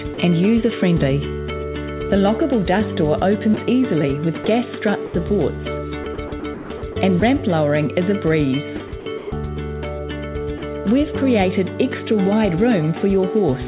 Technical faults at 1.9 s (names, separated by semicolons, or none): none